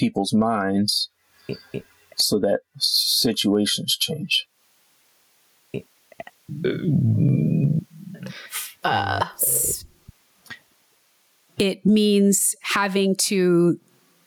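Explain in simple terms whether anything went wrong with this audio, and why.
Gain pumping runs through the whole clip: loud and soft parts are squashed closer together in level, likely from input gain set far too high with a fast limiter.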